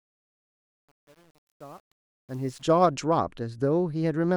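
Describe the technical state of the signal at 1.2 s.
At 1.2 s the fade-in carries truncation distortion, from 0.0 to 2.62 s. Without dither, quiet levels turn into gritty steps, which fits an 8-bit stage.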